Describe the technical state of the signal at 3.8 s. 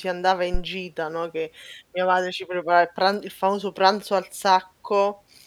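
At 3.8 s the speech signal is intact, with no audible fault at that moment.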